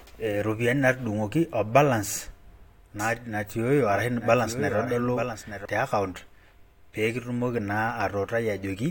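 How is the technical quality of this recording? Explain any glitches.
The recording has one clear glitch. From 2.99 to 5.65 s a doubled audio track appears: a second, full-band copy of the speech runs roughly a second behind the original, about 10 dB quieter. The likely cause is the same signal reaching the mix twice, once through a slower path. Unlike an echo or room reverb, the trailing copy has no decay or room colour, and it switches on and off abruptly at those boundaries.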